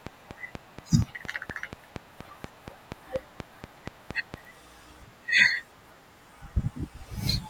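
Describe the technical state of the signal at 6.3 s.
At 6.3 s the speech signal is intact, with no audible technical fault at that moment.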